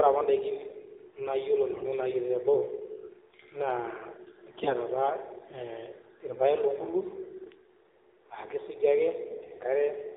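AMR narrowband mobile codec throughout: narrowband coding cuts everything above 4 kHz, and the buzzy, synthetic speech fits a low mode near 7.4 kbit/s. AMR bit errors at 1.70 to 1.85 s, 4.62 to 4.76 s and 9.30 to 9.50 s: a few percent of less-protected bits arrived flipped, turning the speech hoarse, scratchy and gargly while pitch and level roughly hold.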